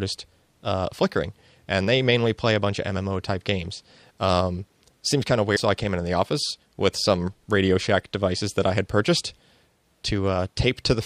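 At 5.55 to 5.58 s the audio jumps forward, with a glitch lasting about one 26.1 ms frame. The likely cause is a broken MP3 bit reservoir: after missing frames, the next frame borrows data from the wrong bytes.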